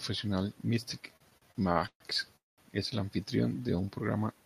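A run of speech is interrupted three times. Between 1.17 and 2.02 s, packets kept reaching the receiver more slowly than they were being played, so its jitter buffer ran dry again and again. The result is repeated stalls (stutter): eight separate gaps, the longest 135 ms, were papered over by stretching the last sound, adding about 316 ms in all. Roughly a third of that stretch is concealment, so the speech drags and hiccups though nothing is actually lost. At 2.36 s comes a call audio freeze lasting until 2.60 s. Here the sound holds briefly, then drops to silence for about 180 ms before resuming exactly where it left off. That pattern of a held tail fading out, then a clean restart with nothing skipped, points to a likely cause of packets held up in transit and the buffer emptying, which inserted about 215 ms of extra delay. Finally, from 3.60 to 3.87 s, a jitter buffer slow-down is audible. 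The receiver, rebuilding its reserve, repeated single pitch periods or bits of pauses to pad out about 48 ms. This plays that stretch at roughly 85% speed without shifting pitch, so the sounds come out drawn-out.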